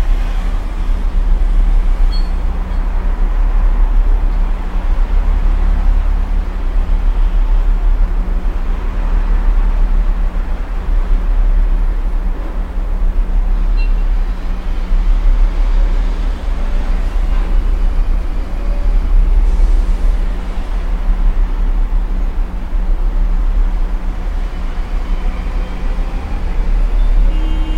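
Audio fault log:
No faults are heard anywhere in this audio. There is nothing to enter in this log.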